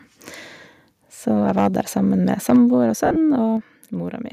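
From 1.49 to 1.67 s, the loudest stretch of the speech turns harsh and crackly. The peaks go about 3 dB past the converter's limit, and their tops are flattened. The likely cause is microphone overload, with the input gain set too high. A small share of samples is clipped here. From 2.49 to 2.56 s it happens again, also about 3 dB over. This time roughly a tenth of the samples are cut, so the crackle is denser.

At 2.56 s, right after that distorted peak, the voice and the background both drop by about 4 dB in one step. No fade leads into it. This is what a microphone volume step-down sounds like. The call software has likely heard the clipping and cut the input gain.

Between 3.06 and 3.17 s, lost LE Audio frames smear the sound. About 80 ms of audio is missing, scattered over about 100 ms. The longest gap is around 50 ms. The loss fits eight 10 ms frames. The decoder fills each gap by repeating the last spectrum with random phase. 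Clear voiced sound becomes a short, hissy blur. The LC3 codec itself likely adds only a light grain.

At 3.57 s the level steps down again, this time by about 6 dB. The background falls with the voice. The cause is likely a second automatic microphone volume cut.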